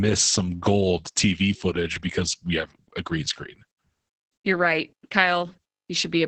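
From start to finish the speech sounds muffled, hoarse and faintly robotic, with nothing present above about 8.7 kHz. This is heavy Opus voice compression. The codec is running in its SILK linear-prediction mode at wideband, which removes everything above that limit, and at a rate that fits roughly 10 kbps it codes the excitation signal coarsely. That coarse excitation leaves the rough, synthetic grain heard throughout.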